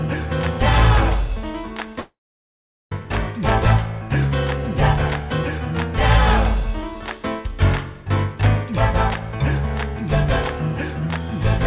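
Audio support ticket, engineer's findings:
Regular clicks/pops, 1.44 s to 11.15 s, every 1.94 s, roughly seven in total. Likely clock drift buffer slips: sender and receiver clocks off by something like 150 ppm, so the buffer creeps until a small block, on the order of 15 samples, is dropped or repeated. Steady spacing rules out random packet loss.

Gap 2.00 to 3.01 s. Last sound smeared into a fading buzz, then silence for about 0.77 s, audio resuming with about 0.92 s of content gone. Likely long network dropout: concealment extended the final frame, gave up, and the jitter buffer restarted later, net timing shift about 11 ms. Band limit at 4 kHz is the G.711 mu-law path at 64 kbps, not a fault.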